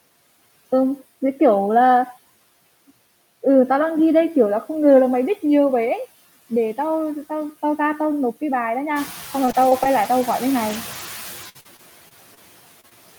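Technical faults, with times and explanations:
Throughout: noise suppressor artifacts. The suppressor pushes steady background noise down by about 17 dB, band by band and frame by frame. The noise therefore dips in pauses and returns beneath the voice. This pumping is most audible after the room noise rises by about 12 dB near 9 s.
9.45–12.93 s: repeated packet loss (robotic sound). Short holes keep appearing, the longest 54 ms. Each one is filled by extending the previous sound. Together they replace about 300 ms, around 8% of the stretch. The result is choppy, with pieces missing.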